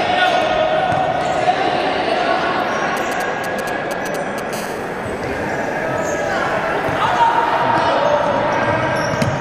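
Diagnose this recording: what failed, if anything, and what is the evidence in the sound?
Analogue wiring: GSM signalling bursts from 2.97 to 4.55 s, galloping 217 Hz ticks roughly 10 dB below the sound, rectified RF, seen as clustered vertical stripes on the spectrogram.

Analogue wiring: GSM phone buzz from 4.55 to 7.63 s, a steady raspy 217 Hz buzz about 25 dB down, seen as evenly spaced harmonic lines and a regular pulse train.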